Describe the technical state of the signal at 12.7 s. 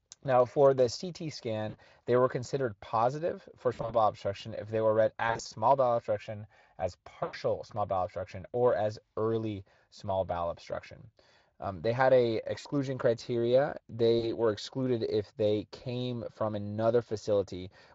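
At 12.7 s the signal is recovering from VoIP packet loss concealed by the speech codec, spanning 12.59 to 12.68 s. About 60 ms of audio went missing, which fits three 20 ms frames. The Speex decoder extrapolated its last pitch and filter with falling gain, producing a buzzy tone or coloured noise that fades. Because each frame builds on the previous state, the sound right at 12.7 s can still be weak or distorted.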